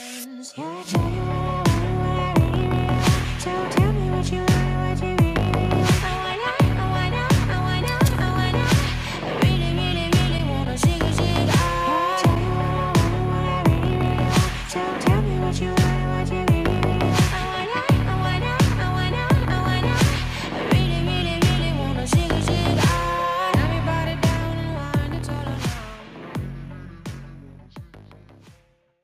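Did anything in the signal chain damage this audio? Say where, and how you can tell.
No, nothing along the chain has left audible damage: level, timing and continuity hold steady throughout, with no sign of trouble at any stage from capture to playback.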